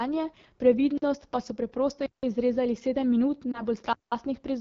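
The speech is carried through the AMR wideband (HD Voice) codec at 8.85 kbit/s, one of its lowest rates. The coding damage is plainly audible throughout. The voice sounds rough and raspy, because too few bits reach the pulse model of the vocal tract.

At 0.98 s comes the first block of digital silence. It lasts about 46 ms, to 1.02 s, which fits a 2048-sample buffer that was not filled in time. The sound drops to silence and returns abruptly. A second block runs from 2.06 to 2.23 s, about 169 ms. It is heard as a short hole with hard edges.

At 3.51 s there is a lost AMR speech frame, a single 20 ms frame. The decoder fills it by repeating the last good settings at falling gain. It is heard as a brief dip or warble, and the sound comes back rough for a moment.

A final block of digital silence runs from 3.93 to 4.12 s, about 186 ms, which fits an 8192-sample buffer. It gives another abrupt gap.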